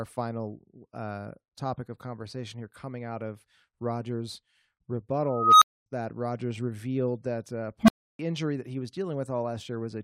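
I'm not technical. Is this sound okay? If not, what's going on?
No. An unstable filter fails twice. At 5.27 s a high whistle, around 1.5 kHz, swells over about 0.35 s until it is harshly loud, then the sound drops out for a quarter second. At 7.83 s a low hum, around 200 Hz, erupts in just 0.05 s and is followed by 0.31 s of silence. A processing step fed back into itself with faulty settings, so its output grew until it overloaded, broke down to silence and restarted.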